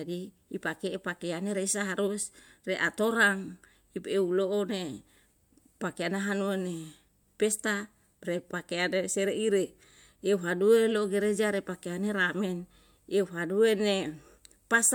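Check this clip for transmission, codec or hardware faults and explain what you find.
No transmission, codec or hardware faults can be heard anywhere in the speech recording, which stays continuous and steady throughout.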